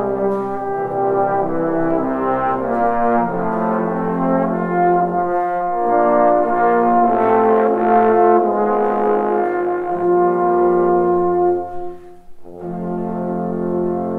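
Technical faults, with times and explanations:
No technical faults can be heard in this clip.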